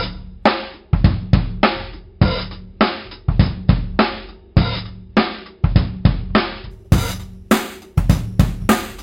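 Imaging from sample-and-hold upsampling runs from 6.71 s to the end. The sound was raised to a higher rate by holding each sample, with no smoothing filter, and the first mirrored image sits between about 5.5 kHz and 11 kHz. That pattern points to a jump from roughly 11 kHz to 44.1 kHz. The images, about 20 dB below the signal, add a bright metallic fizz that rises and falls with the sound, and the lowest copy moves opposite to its pitch.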